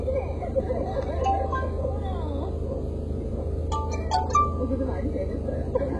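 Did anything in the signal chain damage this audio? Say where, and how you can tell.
Yes, at the codec stage. Throughout, treble sounds gritty and metallic and stops dead at 11.5 kHz, a hard spectrogram ceiling, likely heavy HE-AAC compression at roughly 12 kbps, with band-replicated highs.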